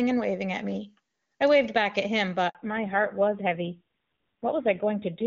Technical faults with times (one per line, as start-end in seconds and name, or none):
2.49-2.55 handover gap
2.55-5.27 fallback to narrowband